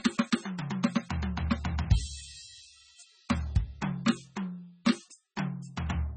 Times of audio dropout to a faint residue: none

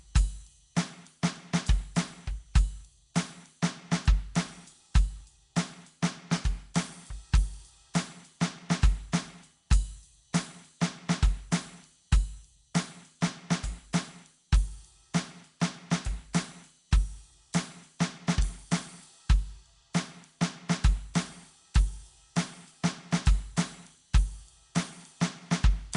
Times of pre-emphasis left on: none

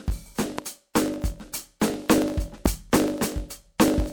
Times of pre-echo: 0.94, 1.80, 3.78

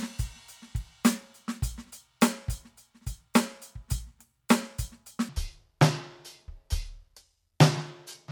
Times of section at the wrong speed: 5.29-8.32

